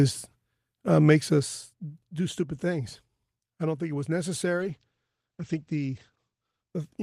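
At 4.58 s a call bitrate drop sets in and lasts to the end. The encoder falls from 32 to 12 kbps. It codes the speech more coarsely and cuts the top from 20 kHz to 8 kHz. The speech turns muffled and rough for the final 1.9 s.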